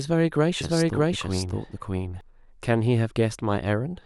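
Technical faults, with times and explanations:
0.61–2.21 s, doubled audio track: a second full-band copy trails by roughly 0.7 s at about equal level, likely from a duplicated capture path, starting and stopping abruptly.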